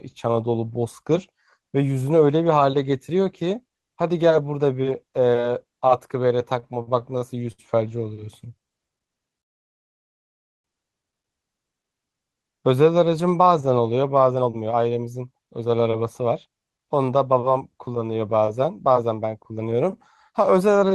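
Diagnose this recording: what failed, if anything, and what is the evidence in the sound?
Repeated stalls (stutter), 6.59 to 7.60 s, in the network and jitter-buffer stage. The speech catches six times, the longest hold 65 ms, with 188 ms of concealment, about 19% of that span. Packets arrived late, the buffer kept draining, and the receiver stretched the last sound until audio resumed.

Call audio freeze, 9.41 to 10.66 s. The speech halts and about 1.23 s of near-silence follows before it resumes from where it stopped, with nothing lost. The likely cause is packets held up in the network, leaving the jitter buffer empty.

Jitter buffer speed-up, 14.32 to 16.68 s at 116% and 18.55 to 20.90 s at 108%. The speech sounds hurried at unchanged pitch. The buffer had built up excess delay and shed it by cutting pitch-period slices, roughly 0.4 s and 0.2 s.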